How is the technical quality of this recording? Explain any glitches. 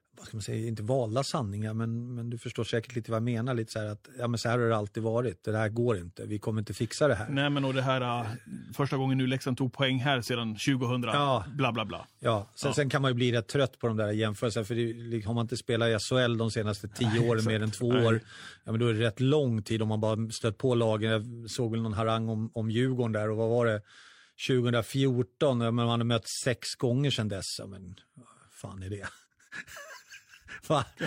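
The technical quality of the recording holds up, and there are no glitches to explain.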